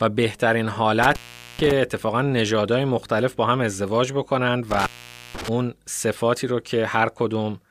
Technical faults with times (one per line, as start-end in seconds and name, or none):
1.03-1.72 intermittent contact
4.71-5.48 intermittent contact